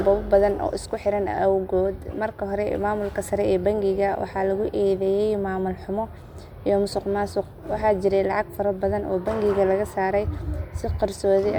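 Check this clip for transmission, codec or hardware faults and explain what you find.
No faults detected.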